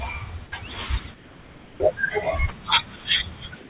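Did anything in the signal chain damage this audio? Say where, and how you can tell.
Yes. In call processing, the pauses at 1.14–1.80 s, 2.96–3.04 s and 3.56–3.69 s turn into steady, featureless hiss, about 3 dB quieter at first. That is likely comfort noise in place of the background. A noise gate would leave silence here, not synthetic noise.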